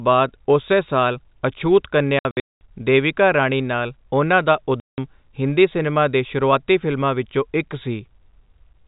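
From 2.19 to 2.61 s and from 4.8 to 4.98 s, packet loss filled with silence punches dead gaps into the speech, the longest 210 ms, in steps that fit 30 ms packets. The waveform flat-lines between abrupt edges, and the spectrogram shows blank columns with hard edges.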